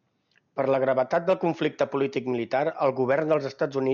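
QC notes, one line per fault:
Nothing stood out on listening to this speech clip.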